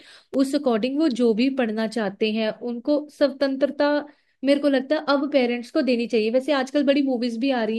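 At 0.34 s there's a block of digital silence, about 5 ms where the speech simply drops to zeros and comes straight back. Nothing fades in or out, so the waveform jumps to silence and back, and those two hard edges sit so close together that they blur into a single sharp tick. What went wrong is that a stretch of samples never got filled before being sent out, or came out of the processing as invalid values and was zeroed.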